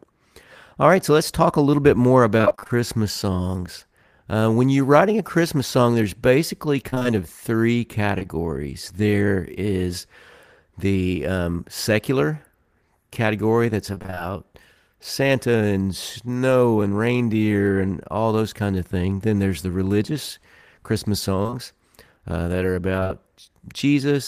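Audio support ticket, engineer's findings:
Repeated packet loss (robotic sound) at 2.37–2.71 s, 6.90–7.06 s, 13.95–14.19 s, 21.43–21.54 s and 23.00–23.11 s. Choppy speech with pieces missing. Network jitter buffer or transport. Gaps of about 20–24 ms recur closely, so roughly half of each stretch is concealment extrapolated from the last audio.

Short concealed packet loss at 8.18–8.23 s and 8.23–8.27 s. Two adjacent holes of about 20 ms each, heard as a brief smear. Packets arrived late or never. The decoder's concealment continued the preceding sound, then crossfaded back into the received audio.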